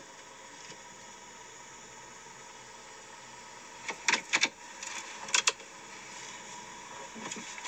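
No technical faults can be heard anywhere in the audio, with the signal path behaving as intended throughout.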